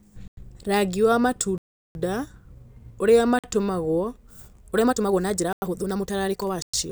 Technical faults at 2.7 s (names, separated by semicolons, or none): none